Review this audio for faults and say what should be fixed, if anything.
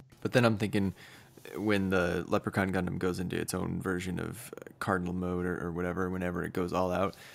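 Nothing stood out on listening, so there is nothing here that needs fixing.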